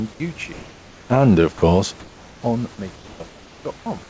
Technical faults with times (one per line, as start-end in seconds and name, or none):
0.97-2.76 automatic gain falling
1.26-1.84 automatic gain rising
1.58-1.61 sound dropped by the voice detector
2.96-3.86 comfort noise in place of the background